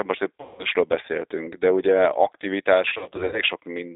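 Throughout, the speech passes through a G.729 codec, whose dull, slightly rough and synthetic character fits an 8 kbit/s G.729A stream. Each frame is rebuilt from a vocal tract filter, a pitch predictor and a few pulses, and a 300 Hz to 3.7 kHz line band removes the lows and everything above.

From 0.41 to 0.65 s, just after "most egy", about 180 ms of audio goes missing in VoIP packet loss concealed by the speech codec. The decoder stretches its last pitch and filter into a fading buzzy tone or coloured noise, and the level only recovers around "beszéltünk de ugye".

From 2.88 to 3.42 s, a second loss scatters about 240 ms of gaps over 440 ms, with no single run longer than 60 ms. Each frame builds on the previous one, so repeated short concealments leave the sound weak and unsteady across the whole span.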